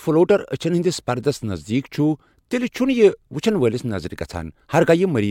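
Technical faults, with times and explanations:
Nothing technical catches the ear anywhere in this bit of speech, so there's no fault to list.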